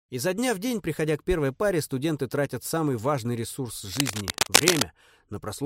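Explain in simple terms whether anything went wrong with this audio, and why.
Something goes wrong from 3.91 to 4.82 s. A burst of scratching and rustling noise covers the sound, a little louder than the sound itself. This is cable scratch noise. A worn cable or plug was likely moved, making its connection flicker rapidly.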